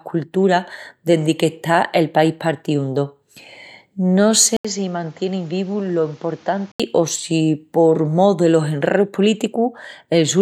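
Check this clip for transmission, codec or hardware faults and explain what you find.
One fault: an input switched to a poorer device. From 4.57 to 6.80 s the speech turns dull and a few dB quieter, with nothing above 7.6 kHz and new, faint background noise, after an 80 ms gap. The recording input likely jumped to a narrower-band microphone, then back.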